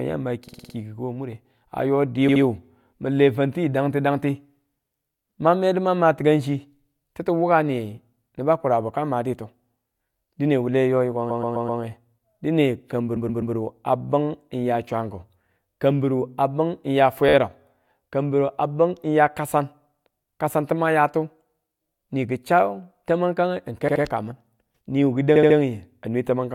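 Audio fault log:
0.47–0.74 s, 2.28–2.42 s, 11.29–11.81 s, 13.16–13.54 s, 17.29–17.34 s, 23.87–24.02 s, 25.35–25.56 s: repeated frames. Short runs of compressed speech were delivered more than once, so blocks of 13 ms to 128 ms replay two to five extra times. This produces a stutter and stretches the speech by up to half a second per run, about 1.7 s in all.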